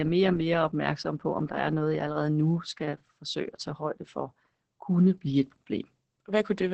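Opus voice compression runs through the whole speech clip. The coder works in its SILK linear-prediction mode, keeping a wideband range up to 8 kHz but coding the excitation coarsely. That leaves the speech muffled, hoarse and slightly robotic, with heavy damage that fits a bitrate near 10 kbps.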